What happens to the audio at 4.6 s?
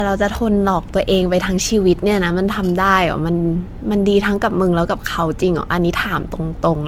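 At 4.6 s the speech carries generation loss, as it does throughout. It sounds swirly, smeared and hollow, with blurred attacks and nothing above 17 kHz. The likely cause is roughly seven rounds of lossy encoding, fitting AAC-LC near 96 kbit/s, each pass adding fresh quantisation damage.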